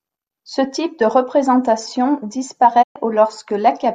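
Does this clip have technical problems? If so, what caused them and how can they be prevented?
Yes. A digital broadcast dropout runs from 2.81 to 2.97 s: the speech fades out over about 20 ms and about 120 ms goes silent, which fits a handful of corrupted frames that the receiver muted until clean frames returned. Preventing it needs stronger reception, such as a better antenna or stronger signal, plus more robust error correction.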